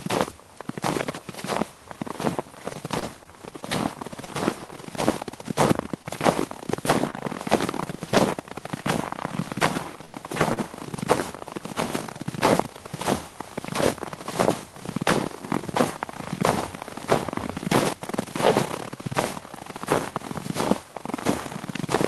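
From 2.99 to 4.28 s there are scattered short gaps. About four small holes appear across this stretch. The receiver covered each by continuing the last sound. Roughly 70 ms is filled in total, about 7% of the span. The longest gap is about 30 ms. They come through as brief ticks and smears.

Short concealed packet loss follows at 6.02 to 6.06 s and again at 7.10 to 7.15 s. Each time, 20 ms of audio never reached the decoder in time. The receiver patched the hole with 19 ms, then 25 ms, of continued sound, and blended back. Each one is heard as a brief smear or wobble.

Two short stalls from a late packet come next, at 10.05 to 10.15 s and 10.53 to 10.59 s. A packet was due but absent, so the jitter buffer ran dry. The receiver held the last sound for 85 ms, then 35 ms, until the packet arrived. Nothing is lost. The sound simply lingers too long, with a buzz or a dip.

Throughout, the audio carries the coding character of an Opus call path, with content reaching up to about 12 kHz, which fits a rate near 24 kbps.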